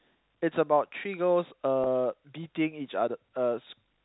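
A brief held, slightly buzzy sustain at 1.84 to 1.86 s, where about 20 ms of speech is missing. This is packet loss with pitch repetition: the receiver repeated the last pitch period to fill the gap.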